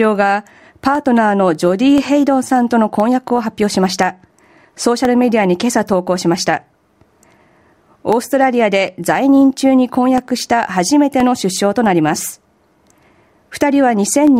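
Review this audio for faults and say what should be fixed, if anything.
Periodic USB or driver dropouts occur from 0.95 s to 14.27 s, repeating every 1.02 s, about fifteen in all. Each time something stalls the USB bus or audio driver, and roughly half a millisecond of signal is replaced by silence, heard as regular ticks. To prevent this, find and disable the background task polling at that interval, or enlarge the driver buffer so brief stalls are absorbed.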